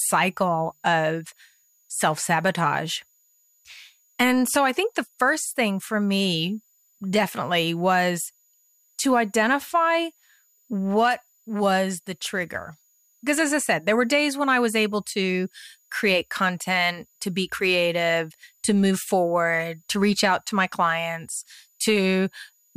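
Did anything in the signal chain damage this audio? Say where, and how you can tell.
Yes: a switching supply whistle from the analogue power stage runs throughout, a faint tone drifting between 6.73 and 6.95 kHz, roughly 40 dB below the speech, showing as a thin wavering spectrogram line near 7 kHz.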